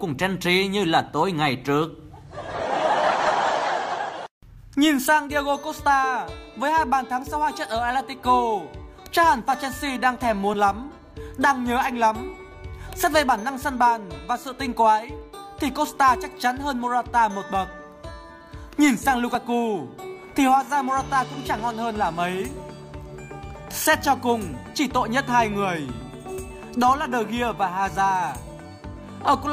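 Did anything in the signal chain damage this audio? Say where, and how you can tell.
Yes. At 10.54, 13.49 and 19.35 s the sound jumps ahead with no gap, losing roughly 10 to 30 ms each time. That points to the buffer stage, likely a dropped buffer (overrun): unread audio was overwritten and the surviving edges spliced together.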